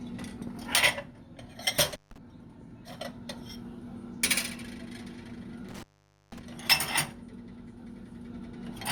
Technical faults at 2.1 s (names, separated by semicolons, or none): intermittent contact